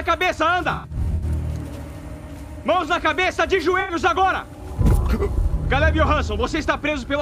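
From 0.71 to 1.24 s, AAC frame loss with concealment smears the sound into noisy patches. Roughly 280 ms is lost in bursts, the longest about a tenth of a second. The decoder rebuilds the gaps from the last good spectrum. A second, shorter loss of about 85 ms, from 3.80 to 3.92 s, sounds similarly blurred.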